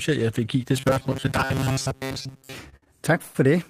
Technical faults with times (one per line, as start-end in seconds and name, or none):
0.77-2.54 robotic sound from repeated short buffers
2.69-3.36 repeated stalls (stutter)